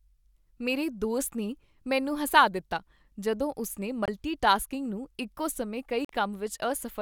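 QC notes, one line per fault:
4.06–4.08 s, Bluetooth dropout: The speech cuts to silence for about 23 ms, then resumes at "ਟਾਸਕਿੰਗ ਨੂੰ ਇੱਕੋ ਸਮੇਂ". This likely reflects one late wireless packet.
6.05–6.09 s, Bluetooth dropout: About 46 ms of silence follows "ਟਾਸਕਿੰਗ ਨੂੰ ਇੱਕੋ ਸਮੇਂ". The speech jumps ahead rather than pausing, which likely fits two consecutive dropped packets.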